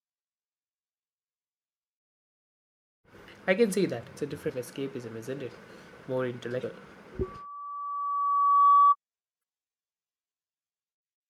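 A brief glitch at 4.46 to 4.50 s, just before "escapism isn't it", is damaged data in a compressed stream: corrupted frames throw the decoder out of sync until it finds the next header. The same fault returns at 6.60 to 6.64 s. From 7.22 to 8.96 s a steady 1.2 kHz tone swells over about a second and a half to roughly 15 dB above the speech. This is loudspeaker feedback squeal, where a microphone picks up its own loudspeaker and loop gain exceeds unity at that frequency. A third, shorter blip from damaged compressed data follows at 9.39 to 9.42 s.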